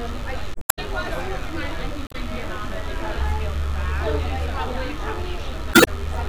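A recording of everyday sounds with two faults. Mains buzz runs throughout: a steady, raspy 50 Hz hum rich in harmonics reaching into the kilohertz range, sitting roughly 20 dB below the wanted sound. It comes from sharp switching spikes, twice per mains cycle, picked up from a dimmer, rectifier or poor shielding. Damaged data in a compressed stream shows up as brief glitches at 0.52–0.79 s, 2.07–2.15 s and 5.71–5.91 s. Corrupted or lost bytes make the decoder misread frames and drop sync until it finds the next valid frame header.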